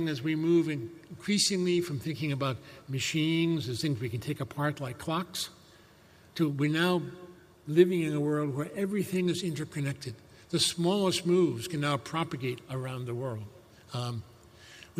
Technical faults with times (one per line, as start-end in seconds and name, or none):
none